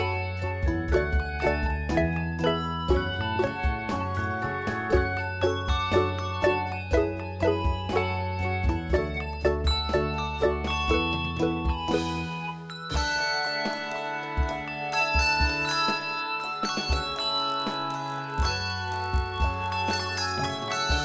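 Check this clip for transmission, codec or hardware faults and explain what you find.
There is one fault. From 16.84 s to the end, a 50 Hz buzz rides on the sound. This is a resampler restarted on every block: each 20 ms block is converted alone, leaving errors at its edges.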